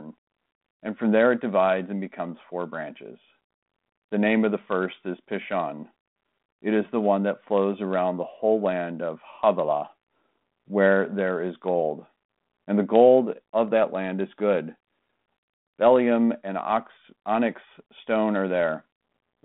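No technical faults are audible.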